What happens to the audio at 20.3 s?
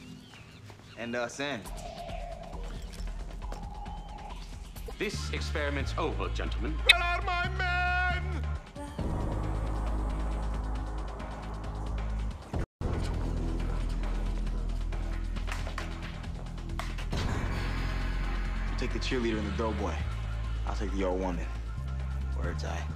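Nothing goes wrong at 20.3 s; the audio plays through that moment intact, with no dropout, click, distortion or other fault to be heard.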